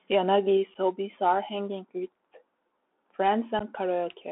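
The entire recording passes through a Bluetooth CVSD headset codec, a one-bit delta modulator that fits a 64 kbps link. It confines the speech to roughly 250 Hz to 3.5 kHz, and its adaptive step lags loud high content, leaving scratchy sibilants, slope-overload distortion and a granular hiss beneath the voice.

Unconcealed Bluetooth headset packet loss follows at 0.74 s, just before "hobbies are hanging with". About two packets, 7.5 ms of audio, go missing, leaving an abrupt hole. A second loss at 3.59 to 3.62 s drops about three packets, 11.2 ms, and produces a similar abrupt gap.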